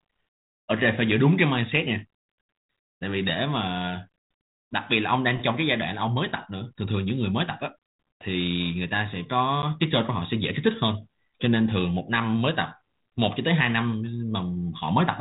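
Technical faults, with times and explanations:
9.62 s, packet loss on an ADPCM call: roughly one packet, about 10 ms, drops out as a hard-edged silent gap. The G.726 decoder's adaptive predictor and step size then disagree with the sender's, so the speech returns with slight distortion, settling within tens of milliseconds.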